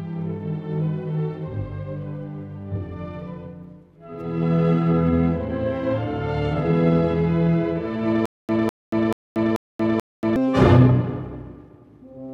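From 8.26 s to 10.36 s the audio breaks into a stutter with silent gaps. A fragment of about 203 ms plays, then drops to digital silence for about 233 ms, and the same fragment returns. The cycle repeats every 435 ms, five times in all. The even rhythm points to a stalled player or stream that likely replayed its last buffered fragment at each retry before running dry. The audio that belonged in that span is simply missing.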